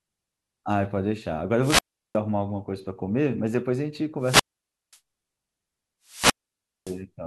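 Three wireless microphone squelch dropouts hit this speech: at 1.60–2.18 s, 4.20–4.99 s and 6.05–7.01 s. Each time the radio link fades, hiss swells, then the receiver mutes for about 0.36, 0.53 and 0.57 s.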